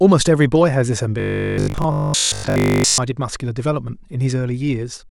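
From 1.20 to 2.98 s the speech turns into a rigid, metallic buzz pitched at 50 Hz, the robotic sound from repeated short buffers. The likely cause is audio arriving too seldom, so playback loops a 20 ms slice over most of the stretch while fresh material is skipped. The words stay roughly traceable, but the fixed 50 Hz drone, unchanged by intonation, sets it apart from codec warbling, whose smeared artefacts shift with the signal.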